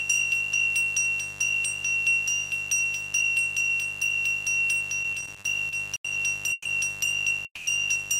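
A mains buzz runs through the whole clip, a steady, raspy tone about 20 dB below the signal and built on 50 Hz. Its harshness sets it apart from a smooth hum. Sharp switching spikes from something like a dimmer or rectifier, twice per mains cycle, spread energy into harmonics reaching several kilohertz, so it rasps rather than drones and stays constant regardless of what the audio is doing.

From 5.03 to 6.07 s the sound suffers repeated stalls (stutter). Eight short holds interrupt the flow, the longest about 80 ms, and together they fill 210 ms, roughly a fifth of that second. Packets kept arriving late, so the jitter buffer emptied again and again, and the receiver stretched the last sound each time before carrying on. Nothing is lost, which distinguishes this from dropouts where material vanishes. The audio drags and stumbles instead of skipping.

Two single call audio freezes follow. 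At 6.52 to 6.68 s the sound hangs for 130 ms, with the held sound trailing into about 10 ms of silence. At 7.45 to 7.69 s a 210 ms hold ends in roughly 60 ms of silence. Each is likely a burst of network delay that drained the jitter buffer. A fading buzz-like continuation fills the wait, then playback resumes exactly where it stopped, so a gap is inserted and nothing is cut. Unlike the stutter, each is one isolated, longer pause.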